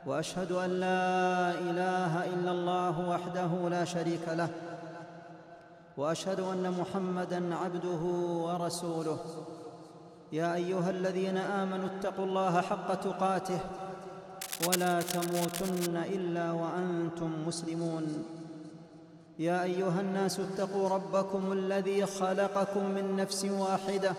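Cable scratch noise runs from 14.41 to 15.88 s, a burst of dense, irregular crackle and rustle laid over the sound for about one and a half seconds. It sits only a little below the sound itself, so it is plainly audible rather than buried. The likely cause is a worn cable, plug or control being moved, so that its contact resistance jumps about rapidly and injects these uneven spurts of noise into the signal path.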